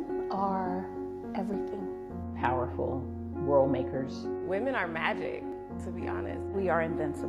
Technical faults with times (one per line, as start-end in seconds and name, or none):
1.54-1.58 overlap between stream segments
5.52-5.56 overlap between stream segments